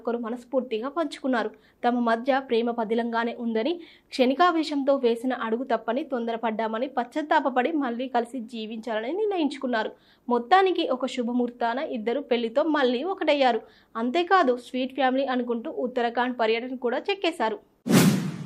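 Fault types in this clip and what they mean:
No technical faults can be heard anywhere in the signal.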